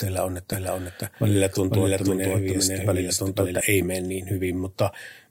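A second, slower capture path likely fed the same speech into the mix again, producing a doubled audio track from 0.53 to 3.61 s. A full-band copy, about as loud as the original, trails by about half a second with no room colour, and it cuts in and out abruptly.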